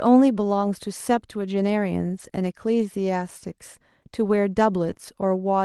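Lost packets rebuilt from error correction appear three times in this speech clip: 2.05 to 2.27 s (about 120 ms), 4.85 to 4.91 s (about 40 ms) and 4.97 to 4.99 s (about 20 ms). The audio never drops out at these points. Instead it turns rougher and grainier, because the decoder is playing a lower-quality backup copy that Opus tucked into the following packet. The sound through the call codec tops out near 12 kHz, so it lacks the highest frequencies even where no packets are lost. A short concealed packet loss sits between the last two repairs, from 4.93 to 4.97 s. Roughly 20 ms arrived too late to use, and no backup copy covered it. The receiver filled about 16 ms of that gap by extending the preceding sound and then blended back into the real signal. The result is a brief smear or wobble.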